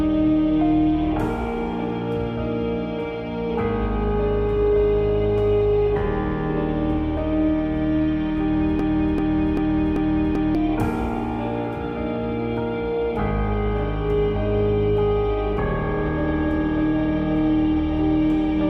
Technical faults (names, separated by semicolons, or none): broken-record loop